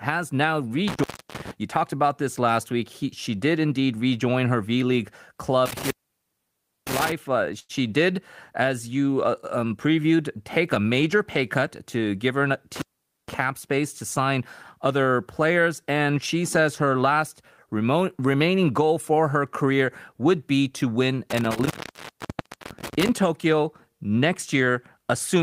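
A speech recording with four dropouts from an intermittent contact: at 0.88–1.51 s (open about 0.31 s), 5.66–7.12 s (about 0.96 s), 12.76–13.34 s (about 0.47 s) just before "space to sign other", and 21.30–23.09 s (about 1.01 s) after "would be to win". A loose plug or cable briefly breaks the circuit. On the waveform the signal collapses to a thin hiss floor between sharp spikes, and the spectrogram shows broadband vertical crackle lines bracketing each near-empty gap. There is also one short stall from a late packet at 7.59–7.71 s. The jitter buffer ran dry, so the receiver stretched the last sound for 98 ms until the packet arrived, losing nothing but adding 98 ms of delay. On the spectrogram this appears as a frozen, smeared band of harmonics, and the waveform shows a repeated-looking segment.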